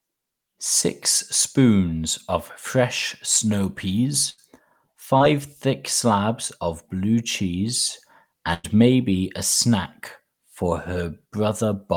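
Speech clip with two bursts of packet loss. After "spoons of fresh snow", 4.29 to 4.40 s, and after "slabs of blue cheese", 8.54 to 8.66 s, the last sound is stretched and fades. Then about 80 ms and 100 ms of audio are gone. A short concealed packet loss at 5.18 to 5.22 s, just before "thick slabs of blue", smears about 20 ms of sound briefly.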